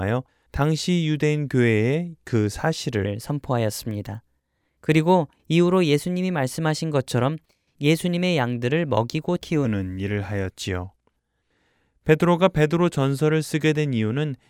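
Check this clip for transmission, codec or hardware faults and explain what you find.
There's one clear fault here: a section at the wrong speed, running from 3.06 s to 9.65 s. Across that stretch the speech plays back 1.12 times faster than it should, so everything shifts up about two semitones and sounds a bit hurried and bright, then drops back to normal right at the boundaries. Because speed and pitch move together like that, it's likely a resampling or clock mismatch in an editor or player handling that segment.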